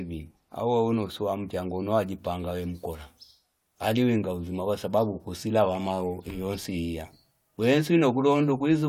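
No technical faults are audible anywhere in this speech recording.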